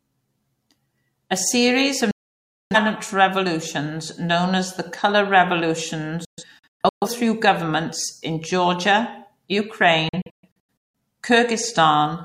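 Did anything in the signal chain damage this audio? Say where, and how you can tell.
Yes: digital broadcast dropout at the receiver, at 2.11–2.76 s, 6.25–7.07 s and 10.09–10.95 s. The speech cuts out within 3 ms each time. The first is one solid 0.6 s gap; the later two are broken holes, longest 128 and 171 ms. Failed frames were muted and that speech lost.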